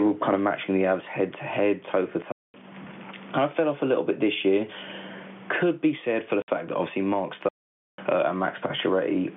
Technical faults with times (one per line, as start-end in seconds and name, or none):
0.00-9.36 gain pumping
2.32-2.54 packet loss filled with silence
6.42-6.48 packet loss filled with silence
7.49-7.98 playback stall